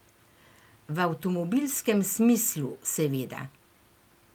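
Nothing in the speech stood out as a technical problem on listening.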